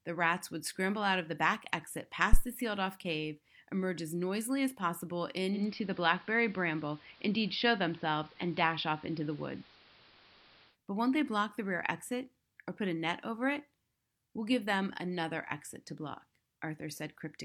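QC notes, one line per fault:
2.33 to 2.43 s, phantom power thump: a deep thump that dies away within about 23 ms. Supply voltage was switched on or off on a live input, and that sudden step passed through the coupling capacitors as a low-frequency pulse before settling.
5.52 to 10.77 s, digital radio blending to analogue: the receiver lost its digital signal and cross-faded over 127 ms to the station's AM broadcast, then back. During that stretch level shifts by about 3 dB, and hiss sits roughly 30 dB below the speech.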